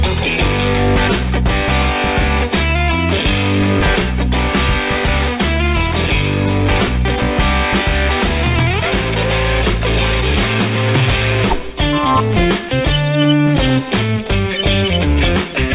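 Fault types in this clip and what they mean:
No technical faults can be heard anywhere in the signal.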